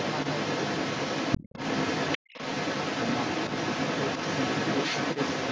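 From the very start to the end, at about 5.5 s, a second voice runs underneath the main talker, and it's strong, sitting around 5 dB above the speech itself, so at times it competes for attention. That's the other side's voice leaking through. Most likely the talker's device is playing the far end over a loudspeaker and the echo canceller isn't pulling it out of the microphone feed, so it rides along with the speech the whole way.

Then, between about 1.38 and 1.54 s, the main speech briefly sinks, dropping by roughly 20 dB at its lowest for around 150 ms, a quick dip before it comes back up. That's speech suppressed in double talk. The likely cause is both sides talking over each other at that moment, leaving the canceller unable to tell its own talker from the echo, so it turned the speech down for a beat. The call's microphone processing comes through as a top end that stops at 8 kHz.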